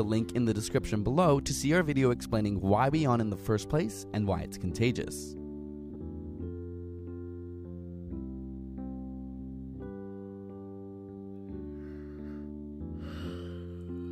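The audio has one fault: frames out of order between 5.90 and 6.01 s. Two adjacent blocks of about 52 ms each play in swapped order, which fits pairs of codec frames arriving reversed. The result is a brief garbled flutter, and no time is lost.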